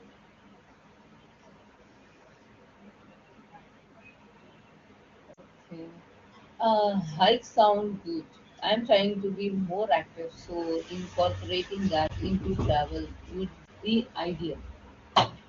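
Lost AMR speech frames at 5.33–5.40 s, 12.08–12.11 s and 13.65–13.69 s: failed frames get patched from the last good ones, giving brief dips or warbles.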